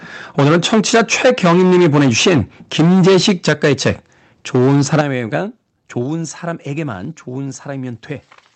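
From 0.38 to 2.42 s the speech shows microphone overload. The loudest parts break up with a crackling, flattened edge. The likely cause is an input volume set about 13 dB too high, so the converter's limit cut off the tops of the waveform. Roughly a fifth of the samples are clipped. Two more overloaded stretches follow, from 2.79 to 3.92 s at about 13 dB over and from 4.54 to 5.01 s at about 8 dB over.

Alongside these, the microphone volume is stepped down five times. Each step is a sudden drop in the level of the voice and the background together. It is likely the call software turning down the device's input gain after finding it too hot. The steps come at 0.40, 3.49, 6.03 and 7.05 s, about 3 dB each. The step at 5.01 s comes right as the third overload ends and is about 10 dB.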